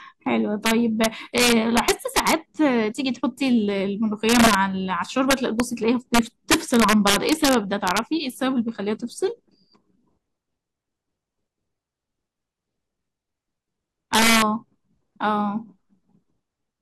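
A gain stage pushed samples past the largest integer value and let them wrap to the opposite sign instead of limiting them. This integer overflow hits the speech from 0.66 to 2.33 s (overdriven by about 7 dB), 4.29 to 4.55 s (about 3 dB), 5.31 to 5.60 s (about 1 dB), 6.14 to 7.99 s (about 4 dB) and 14.14 to 14.42 s (about 4 dB). Each peak flips across the full range, producing violent cracks far sharper than clipping.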